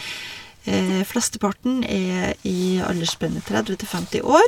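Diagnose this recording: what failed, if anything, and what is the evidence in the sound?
Codec stage: corrupt frames were decoded, their flipped bits misplacing energy across a few frames each, so the speech carries short chirps or bursts of noise at 0.87–0.91 s and 3.97–4.01 s.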